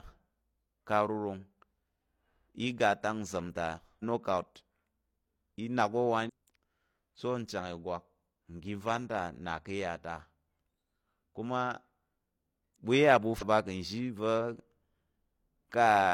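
Speech with three short bursts of damaged data in a compressed stream: at 3.99–4.03 s, just after "iga ta sam ta", at 6.25–6.30 s, and at 13.38–13.43 s. Each lasts about 45–55 ms. The decoder misreads corrupted frames, loses sync and hunts for the next frame header.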